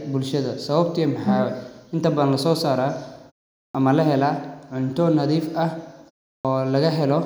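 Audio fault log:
3.62 s and 6.32 s: clipped start after a pause. The output device wakes after short silences and swallows about 125 ms of sound, not just background.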